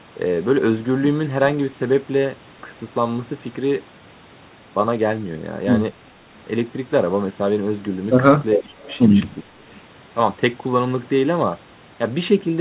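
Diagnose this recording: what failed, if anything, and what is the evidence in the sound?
Call processing: speech suppressed in double talk at 8.56–8.83 s and 9.43–9.73 s. Level dips of about 25 and 20 dB, rather than true silence, distinguish it from packet dropouts. The likely cause is the echo canceller ducking both talkers.

Call processing: an echo leak from 8.64 to 8.99 s. A faint copy, roughly 25 dB down, trails the sound by 403 ms. Its fixed delay sets it apart from room reverberation. It likely comes from loudspeaker pickup that the canceller failed to remove.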